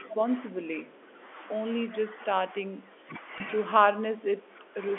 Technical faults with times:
0.04-0.11 echo leak
0.10-0.24 speech suppressed in double talk
0.50-1.21 speech suppressed in double talk
0.96-1.26 echo leak
1.88-3.15 speech suppressed in double talk
3.38-3.40 packet loss with pitch repetition
3.91-4.78 speech suppressed in double talk

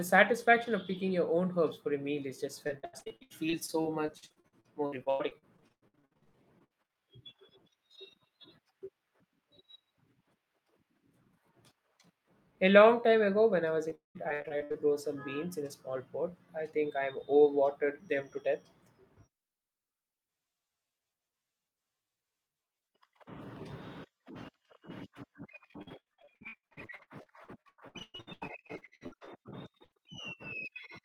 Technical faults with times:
2.67-7.01 repeated packet loss (robotic sound)
13.89-14.76 repeated packet loss (robotic sound)
25.82-29.98 repeated packet loss (robotic sound)

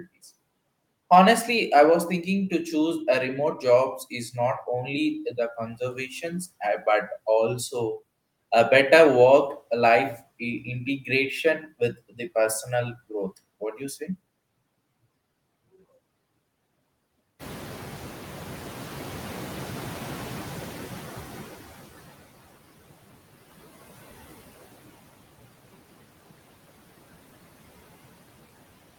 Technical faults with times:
0.00-28.98 noise suppressor artifacts
17.39-22.11 noise suppressor catching up

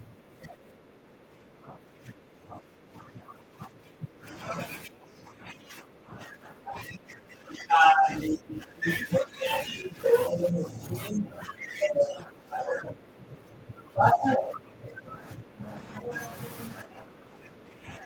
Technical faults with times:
0.00-4.49 speech suppressed in double talk
4.85-9.45 speech suppressed in double talk
9.70-9.98 speech suppressed in double talk
10.29-16.13 speech suppressed in double talk
16.83-18.06 speech suppressed in double talk

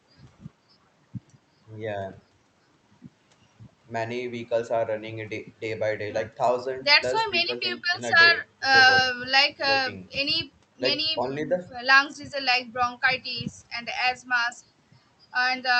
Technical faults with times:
none

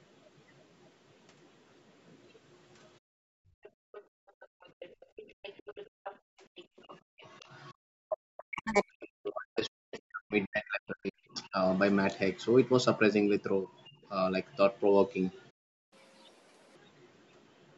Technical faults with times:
3.00-4.04 background gated by the echo canceller
3.63-7.45 other side's voice leaking through
4.32-4.79 speech suppressed in double talk
5.07-5.16 background gated by the echo canceller
5.87-7.21 background gated by the echo canceller
7.98-11.59 speech suppressed in double talk
8.13-8.40 playback stall
8.40-8.89 catch-up at higher speed
13.77-13.82 other side's voice leaking through
13.89-14.04 background gated by the echo canceller
15.50-15.93 playback stall
15.93-16.76 catch-up at higher speed

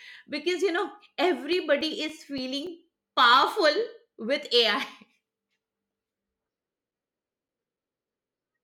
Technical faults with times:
1.24-3.52 CD scratch ticks

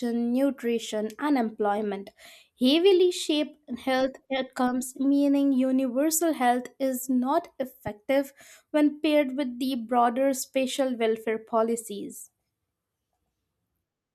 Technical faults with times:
7.87-7.89 loud pop

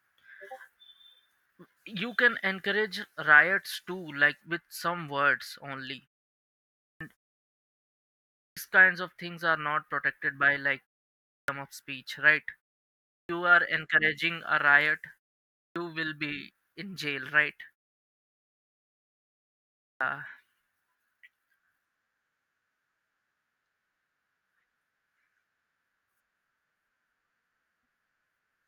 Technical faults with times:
6.74-7.01 clipped start after a pause
8.32-8.57 clipped start after a pause
11.25-11.48 clipped start after a pause
13.06-13.29 clipped start after a pause
15.50-15.76 clipped start after a pause
19.76-20.01 clipped start after a pause

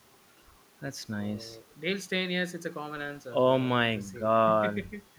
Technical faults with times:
none

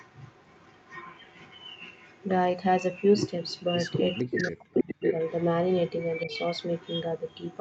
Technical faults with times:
0.00-2.28 echo leak
2.93-7.60 echo leak
4.21-5.03 speech suppressed in double talk
6.25-6.29 speech suppressed in double talk

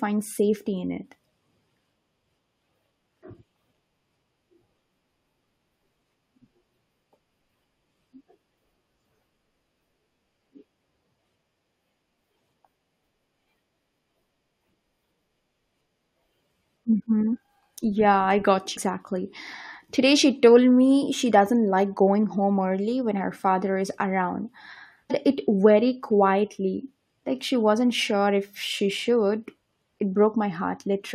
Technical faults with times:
18.76 damaged data in a compressed stream
25.10-25.12 damaged data in a compressed stream

